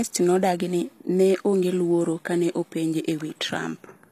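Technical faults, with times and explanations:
Throughout, HE-AAC compression, likely: plainly audible treble rebuilt from copied lower bands, not simply dulled, with nothing above 14.9 kHz, fitting a bitrate near 24 kbps.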